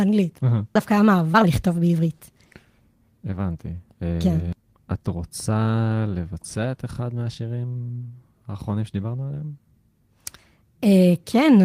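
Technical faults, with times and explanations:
0.75 to 0.77 s, skip ahead: about a second and a half of audio was dropped while later audio waited, so playback jumps forward with no gap at the join.
0.79 to 2.96 s, jitter buffer speed-up: the overfull buffer repeatedly cut short pitch-period pieces, roughly 0.4 s in all, so speech runs at 116% speed, hurried but unchanged in pitch.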